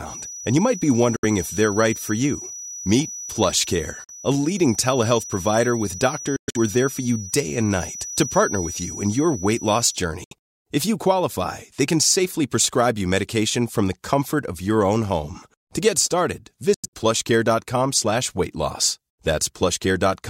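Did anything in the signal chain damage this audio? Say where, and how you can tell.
Yes. A feedback whistle sits under the speech from the start of the clip to about 10.07 s: a thin, steady tone at 5.9 kHz, well below the speech level and swelling and fading slowly, then gone. It does not grow, so the loop never ran away. The stage is acoustic capture, likely a loudspeaker-to-microphone path held just at the edge of oscillation, with gain close to unity at that one frequency.

There are also five Bluetooth dropouts, most likely on the wireless playback link, where late packets were discarded and the output went silent. The holes are at 1.16 s (70 ms), 4.04 s (46 ms), 6.36 s (163 ms of gaps over about 190 ms), 10.24 s (70 ms) and 16.74 s (139 ms over about 190 ms). The speech resuming further on, as if it had kept running, points to lost frames rather than a stall.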